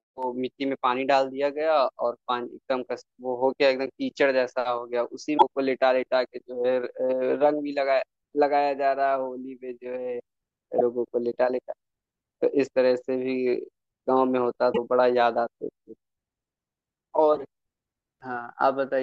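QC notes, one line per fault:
5.34–5.43 s, 10.75–10.81 s, 14.70–14.78 s: damaged data in a compressed stream. At each point the compressed speech contains corrupted bytes, so the decoder misreads the affected frames, loses sync and has to hunt for the next valid frame header. While it is out of step the sound breaks up, heard as a short chirp, squawk, click or hole lasting roughly 80 ms, 60 ms and 80 ms. The speech then resumes once decoding locks back on.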